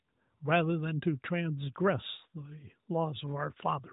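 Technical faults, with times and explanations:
No technical faults are present; the speech passes through the AMR narrowband mobile codec, with nothing above about 3.8 kHz.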